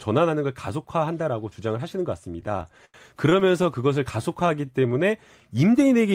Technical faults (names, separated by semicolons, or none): repeated stalls (stutter); jitter buffer slow-down